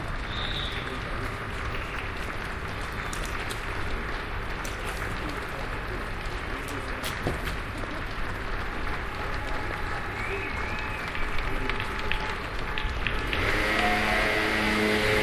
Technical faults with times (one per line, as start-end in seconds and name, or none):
none